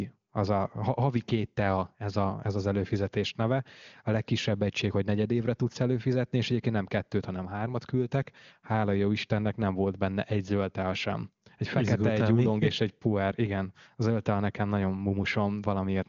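Nothing stood out on listening to this speech, which carries AMR wideband (HD Voice) coding at 23.85 kbit/s with little or no audible trace of it.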